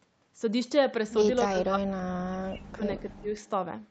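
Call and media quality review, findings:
Speech ducks and breaks up in pieces, 1.47–3.40 s, deepest dips about 40 dB. Likely speech suppressed in double talk: echo canceller muting the near talker during overlap.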